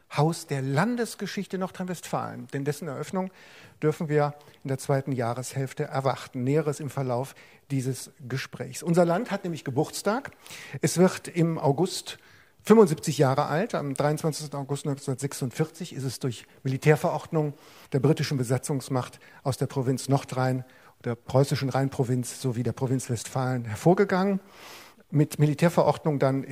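No technical faults are audible.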